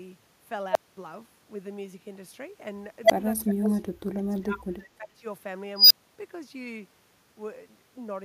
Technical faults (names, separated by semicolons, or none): echo leak; speech suppressed in double talk